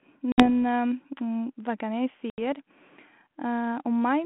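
A speech recording over what sounds like a 32 kbit/s G.726 ADPCM line shows packet loss on an ADPCM call twice: a hard-edged 60 ms hole at 0.32 s and an 80 ms one at 2.30 s, each a few packets long. Afterwards the decoder's predictor and step size lag the sender's, so the speech comes back slightly distorted and settles by 0.48 and 2.39 s.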